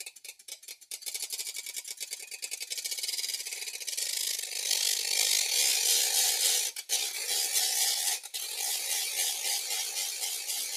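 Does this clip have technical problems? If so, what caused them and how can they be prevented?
Yes. A noise suppressor built for speech was left on this audio. It treats steady tones and fading tails as noise and turns them down, so the level pumps by around 5 dB throughout. Sudden sounds get through while held sounds sink. Bypass speech noise suppression for music and non-speech sound.

The sound cut by the noise suppressor is worst at 0.1 to 0.9 s, 6.75 to 6.91 s, 8.18 to 8.6 s and 9.6 to 10.76 s. There the suppressor pulls sustained material down by about 8 dB, and by about 7 dB at the end, and cuts decays short. Turning the suppressor off, or setting it far gentler, prevents this.

Overlap-add ripple runs from 4.06 to 5.43 s. Frames were windowed and rejoined with an overlap that does not sum to constant gain. The level dips about 11 dB once per frame, around 50 times a second, giving a rough, fast flutter. 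Use window and hop pairs that satisfy the constant-overlap-add condition.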